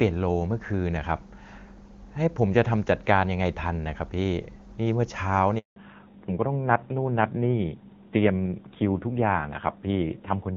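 At 5.58 s a handover gap opens: the call switches networks, no speech frames arrive, and the sound fades within a few tens of milliseconds into 180 ms of silence until 5.76 s. On a waveform this is a flat line; on a spectrogram, a blank vertical band.

From 5.76 s to the end, the call falls back to narrowband. The HD Voice link, whose clean wideband sound before the gap fits AMR-WB at around 23.85 kbit/s, gives way to a low-rate narrowband codec. Nothing is left above 4 kHz, so the sound turns duller and rougher. A spectrogram shows the upper band cut off sharply at 4 kHz.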